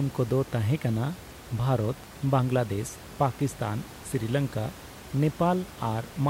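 No technical faults are present.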